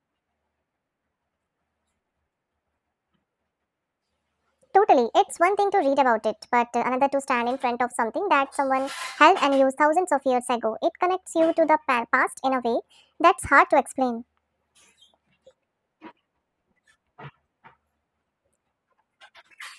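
From start to finish the speech plays at the wrong sample rate. It runs 1.5 times too fast and sits about 7 semitones high, so voices sound chipmunk-like and hurried. Speed and pitch rising together by one ratio fits 16 kHz material played out at 24 kHz without conversion. On a spectrogram, harmonics and formants sit half again higher, with content stopping at a hard ceiling near 12 kHz. The waveform shows syllables squeezed closer together.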